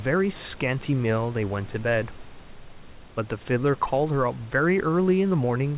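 Nothing goes wrong anywhere in this speech, which simply carries the narrow telephone bandwidth of the call path, with nothing above 4 kHz as you'd expect from a G.711-style codec, plus a bit of room noise sitting about 26 dB below the speech.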